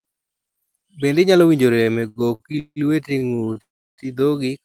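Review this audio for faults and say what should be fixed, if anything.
Repeated stalls (stutter) from 1.75 to 2.79 s, just after "inyalo winjo": nine brief holds filling about 406 ms, the longest 168 ms, as the jitter buffer kept running dry. Again from 3.18 to 3.59 s: five shorter holds, about 133 ms in total. On a spectrogram, harmonics smear into flat horizontal bands; the waveform shows repeated or fading segments.

A call audio freeze follows from 3.62 to 4.01 s: the sound holds, then falls to near silence for about 330 ms before resuming where it stopped. The likely cause is packets held up in transit long enough to empty the buffer. The spectrogram shows a decaying band and then a blank column, and the waveform flattens.

A deeper adaptive jitter buffer and a steadier network path, with less congestion and prioritised voice traffic, would prevent both faults.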